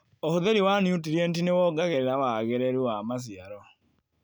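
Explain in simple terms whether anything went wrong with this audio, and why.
Nothing went wrong with this recording of speech; there are no dropouts, glitches or other technical faults anywhere in it. The sound carries on steadily from the first moment to the last, with no break, jump or sudden change to point to.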